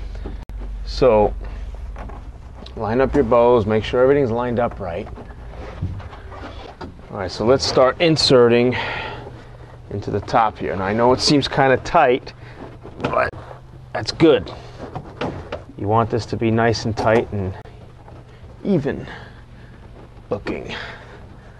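A digital broadcast dropout at 0.43 s, where the receiver lost its frames and muted, leaves a 64 ms hole that fits two lost frames of about 32 ms each. The sound cuts out and resumes, with that stretch gone.

At 13.30 s another digital broadcast dropout mutes the receiver for 32 ms, consistent with a single failed frame, leaving a brief gap.

From 13.49 s to 14.07 s, a gross drift correction step, likely from clock-matching software abruptly changing the playback rate, shifts speed by about 5.4% and pitch by about 90 cents together. The result is a sudden detuning of nearly a semitone.

At 17.62 s a final digital broadcast dropout mutes the receiver for 32 ms, matching one lost frame, and briefly cuts the sound.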